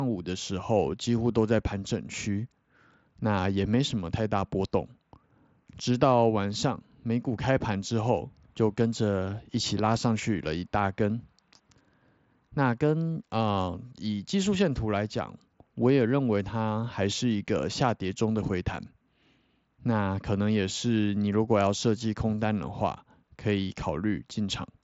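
No technical faults can be heard in this speech recording. It has passed through a Bluetooth mSBC headset codec, which stops the audio at 8 kHz and leaves a light grainy texture on the louder sounds.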